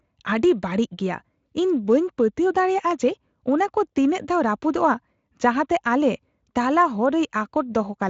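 Speech with no technical faults; it has gone through Speex, which sounds like a high-quality setting, with the band ending near 7.7 kHz.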